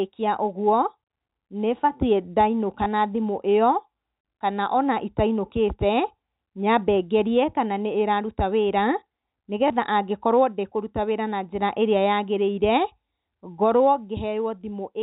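A small blip occurs at 2.84 to 2.86 s, just before "na thimũ", and again at 9.68 to 9.70 s. Both are packet loss with last packet repeated: about 20 ms went missing, which points to a single lost packet, and the receiver replayed the previous one.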